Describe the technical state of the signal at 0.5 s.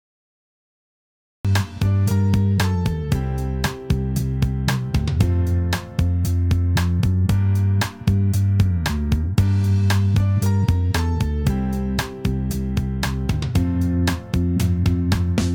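At 0.5 s you're in dead digital silence: this is a cut-off start running from 0 to 1.45 s. Capture began late, so at 1.45 s the sound jumps straight in mid-event, with no natural attack or fade-in leading up to it.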